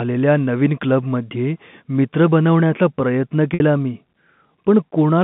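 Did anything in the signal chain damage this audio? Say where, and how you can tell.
Yes, at the network stage. Right after "क्लबमध्ये मित्र बनवण्याचा प्रयत्न", from 3.54 to 3.60 s, there is packet loss with pitch repetition. The last voiced cycle repeats as a brief, buzzy held tone. It fades away over about 50 ms of the 60 ms gap, which fits three lost 20 ms packets. Speech then cross-fades back in. The receiver's concealment made this sound by looping one pitch period to bridge the missing audio. It all sits inside the narrow G.711 telephone band.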